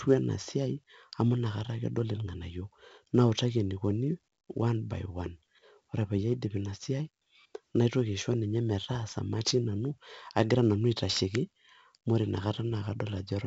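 Throughout the speech, 4-bit ADPCM compression at 64 kbps, which fits a 16 kHz sample rate, leaves heavy gritty hiss riding on every loud syllable, with harsh smearing on sharp onsets. A spectrogram shows broadband noise swelling with level and nothing above 7.8 kHz.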